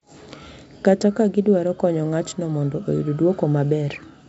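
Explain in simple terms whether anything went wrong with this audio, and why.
Nothing went wrong with this speech recording. It was carried over G.722 wideband telephone coding, which is working as intended here: the sound contains nothing above 7.7 kHz, and any trace of the coding is faint at most.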